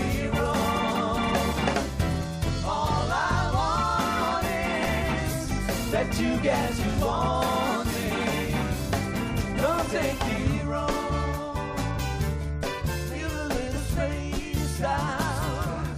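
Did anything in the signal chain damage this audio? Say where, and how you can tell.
Yes. At the codec stage, compressed frames were skipped: whole frames never reached the decoder output, either missing from the file or rejected as damaged. At 0.94 s the audio jumps ahead by roughly 50 ms, about two frames, and at 13.76 s by roughly 20 ms, about one frame, consistent with a 23.2 ms frame length.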